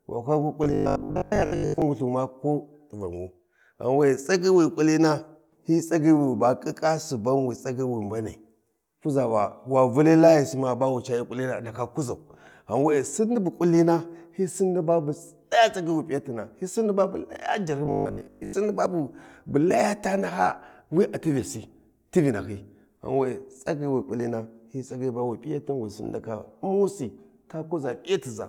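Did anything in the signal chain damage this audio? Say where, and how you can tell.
Yes. Robotic sound from repeated short buffers appears from 0.64 to 1.82 s and again from 17.85 to 18.53 s. The speech turns into a rigid, metallic buzz locked at 50 Hz that still loosely follows the syllables. This likely comes from the driver or buffer stage running short of fresh audio and looping the last 20 ms block, which sets the 50 Hz pitch. Most of each span is repeated material, and the real audio in those gaps is lost.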